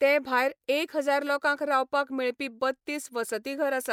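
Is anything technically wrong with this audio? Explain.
No, nothing is technically wrong with this audio.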